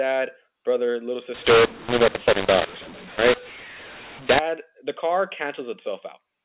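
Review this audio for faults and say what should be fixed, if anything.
From 1.34 s to 4.39 s, between "brother little" and "the car", the speech turns harsh and gritty. This is mu-law and A-law mixed up. A-law telephone samples are decoded as mu-law. Levels come out scrambled, and quiet gaps fill with noise. To prevent it, carry the G.711 law with the stream and check it before decoding.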